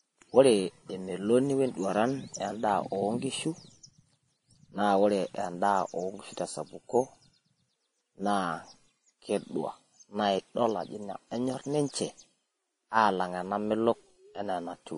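Throughout the speech, nothing is present above 10.6 kHz, and two different sets of coding artefacts sit on top of each other. This is likely transcoding between lossy codecs, consistent with WMA at around 64 kbit/s re-encoded to Vorbis at around 31 kbit/s, the second stage re-coding the first stage's artefacts.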